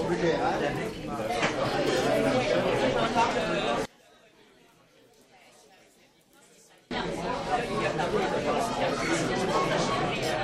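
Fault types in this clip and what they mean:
One channel inverted: From 3.85 to 6.91 s the mono sum of this everyday sound falls by about 29 dB, leaving only a faint residue until full level returns. The likely cause is one stereo channel with reversed polarity, so whatever both channels share cancels when they are added together. On a waveform the envelope collapses to a narrow band across that span. A spectrogram shows the whole frequency range dimming abruptly at both edges.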